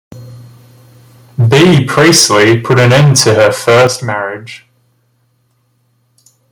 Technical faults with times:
1.40-3.87 microphone overload
1.53 microphone volume stepped down
3.87 microphone volume stepped down

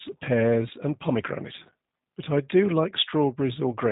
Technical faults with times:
0.00-3.92 G.729 codec

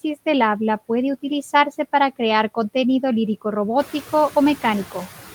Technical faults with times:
0.00-5.34 noise suppressor artifacts

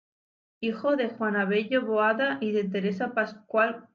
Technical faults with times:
none

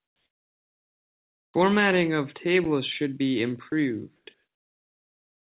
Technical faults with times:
0.00-1.54 comfort noise in place of the background
1.49-1.54 onset clipped by the voice detector
3.70-3.72 sound dropped by the voice detector
4.16-4.26 comfort noise in place of the background

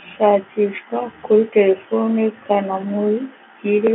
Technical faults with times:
none

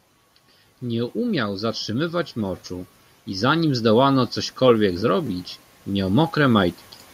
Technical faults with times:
0.80-5.37 automatic gain rising

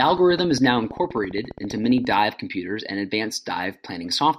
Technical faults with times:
0.04-2.19 train of clicks

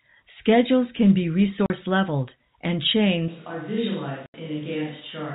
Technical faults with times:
1.66-1.70 packet loss filled with silence
3.28-5.34 switch to a distant microphone
4.26-4.34 packet loss filled with silence

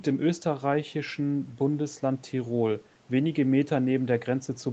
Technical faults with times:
none

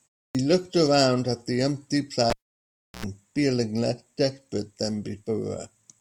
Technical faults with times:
0.31-0.35 clipped start after a pause
2.30-3.05 cable pulled and plugged in
2.90-2.94 clipped start after a pause

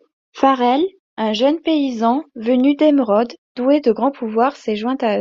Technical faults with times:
none

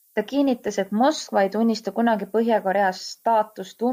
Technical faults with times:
0.00-3.92 low bit depth with noise shaping

